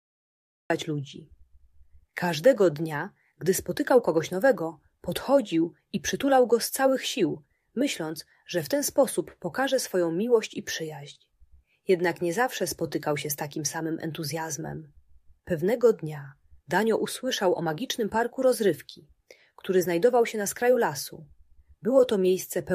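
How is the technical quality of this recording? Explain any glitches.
The recording has one clear glitch: a cut-off start. The first 0.7 s is digital silence. Sound then appears abruptly at 0.7 s, already mid-sound. Capture evidently began late, missing the real beginning. There is no natural attack or fade-in.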